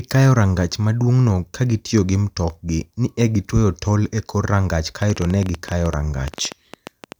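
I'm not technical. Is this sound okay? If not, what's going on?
No. From 5.02 to 7.13 s a train of clicks, about ten a second and unevenly spaced, ticks over the speech, likely from nearby equipment or a faulty connection.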